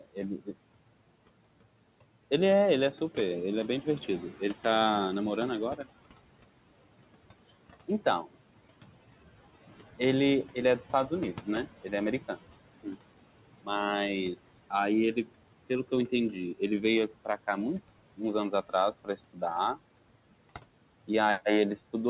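Through the whole clip the room noise pumps: it sinks away in the gaps and swells back under the speech. These are noise suppressor artifacts. The suppressor estimates the steady background and pulls down each frequency band it judges to be noise, frame by frame, here by about 18 dB. The room noise itself sits about 16 dB under the speech, dulled by the narrowband call path, whose top end stops at 4 kHz.

In five stretches, the suppressor also eats into the speech itself, so parts of syllables sound swallowed or suddenly faint. These are cases of speech cut by the noise suppressor. From the very start to 0.48 s, a small portion drops by up to about 19 dB. Between 9.99 and 12.96 s, roughly a third of a second in total is turned down by up to about 14 dB. From 15.84 to 17.48 s and again from 18.17 to 19.79 s, the dips reach about 17 dB, adding up to a few hundred milliseconds each time. The last one runs from 21.07 s to the end and goes down by about 14 dB. 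In each of these, parts of the speech were mistaken for background noise and lowered along with it.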